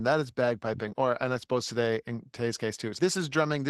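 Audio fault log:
0.83–0.93 s and 1.69–1.71 s, lost packet rebuilt from error correction: after "that is" and "and I suppose", there's no gap, just short rough, noisy patches where the decoder played low-bitrate backup copies.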